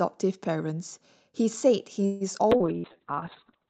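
At 2.05 s the speech stalls for about 152 ms and then picks up exactly where it left off. You hear the last sound stretched into a fading buzz or hiss rather than silence. That's a call audio freeze, most likely packets held up in transit until the jitter buffer ran dry, so a gap gets inserted but nothing is lost.

Right after, at 2.39 to 2.43 s, there's a skip ahead. A bit under a tenth of a second of speech is simply gone, with only a tiny patch of filler, and the two sides butt together almost directly.

From 2.57 s to the end there's a call bitrate drop. The Opus stream falls from 32 kbps to 7 kbps after the bandwidth estimate sagged. The audio bandwidth halves from 8 kHz to 4 kHz, so the rest sounds muffled and a bit rough and watery.

Overlapping that start, at 2.58 to 2.63 s, there's short concealed packet loss. About 60 ms never arrived, and roughly 23 ms of patched-in continuation covers it. 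It comes across as a quick smear before the real audio blends back.

At 2.78 to 2.87 s a burst of packet loss hits. Around 60 ms is missing, filled by about 59 ms of the previous sound held and faded out, a brief buzzy or hissy stretch. Then the speech resumes further on.

Finally, from 2.88 to 3.52 s, a jitter buffer slow-down pads in about 98 ms by repeating pitch periods and bits of pause. The speech plays at about 86% speed with the pitch unchanged, so it drags.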